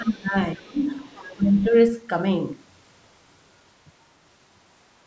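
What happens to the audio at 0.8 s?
Around 0.8 s the speech is caught in speech suppressed in double talk from 0.55 to 0.85 s: the echo canceller, likely confused by both sides talking at once, pulls the level down by up to about 25 dB, visible as a shrunken waveform envelope and a faded spectrogram band. From 0.79 to 0.85 s the other side's voice leaks through faintly, around 40 dB below the speech, likely leftover loudspeaker echo, showing as weak extra harmonics in the spectrogram.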